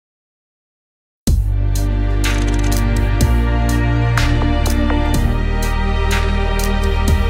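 At 6.11 s there is a single sharp click. It is likely dropped samples: a fraction of a millisecond goes missing, so the waveform jumps abruptly.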